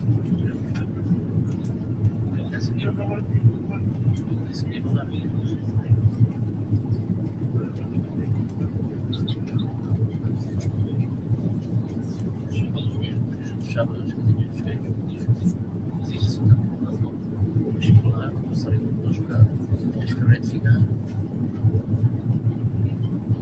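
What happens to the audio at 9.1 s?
A speech-tuned noise suppressor is running throughout, 9.1 s included, treating held tones and tails as noise and pulling them down by about 5 dB, so the sound pumps and thins.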